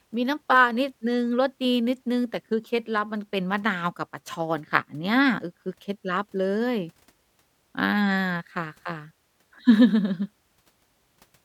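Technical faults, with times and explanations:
0.14–11.42 s, clock slip clicks: faint ticks recur about ten times a second, around a hundred in all, likely from two unsynchronised clocks differing by roughly 200 ppm, each slip dropping or repeating one sample. A spectrogram shows evenly spaced thin vertical broadband lines during speech, and the waveform shows tiny single-sample steps.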